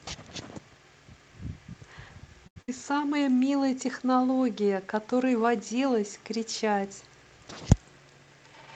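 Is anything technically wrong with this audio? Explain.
Yes, there are three problems in this speech clip, two close together and one near the end.

At 2.47 to 2.57 s, a sound hangs for about 86 ms with a slight buzz or dip, then carries on with nothing lost. This is a short stall from a late packet. The jitter buffer ran dry, so the receiver stretched the last audio until the packet arrived, adding 86 ms of delay.

At 2.62 to 2.69 s, the sound briefly holds and fades for about 58 ms, then jumps ahead, skipping roughly 60 ms. This is a burst of packet loss. Consecutive audio never arrived in time, so the receiver extended and attenuated the last sound, then resumed past the gap.

From 7.79 to 8.43 s, the speech sounds rushed, at about 112% speed with unchanged pitch. This is a jitter buffer speed-up. Too much audio had built up in the buffer, so the receiver cut out small pitch-period slices, removing about a tenth of a second in total to reduce delay.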